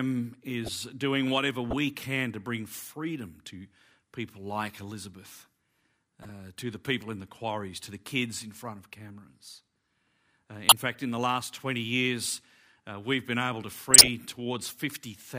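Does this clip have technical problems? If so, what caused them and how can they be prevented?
Yes. Corrupt frames were decoded at 0.65–0.70, 1.70–1.73, 6.22–6.30, 10.69–10.72 and 13.91–14.08 s. Flipped bits made the decoder put energy at wrong frequencies, causing brief chirps and noise bursts, strongest in the last two, rather than the gap or smear of a concealed lost packet. Checksumming frames and concealing any that fail, instead of decoding them, prevents this.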